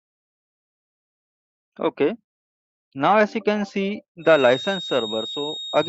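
From 4.19 s to the end, a loudspeaker-to-microphone loop likely sits right at the edge of feedback, so a single 3.7 kHz tone keeps ringing without running away. The feedback whistle is thin and steady, well below the main sound, swelling and fading slowly in level.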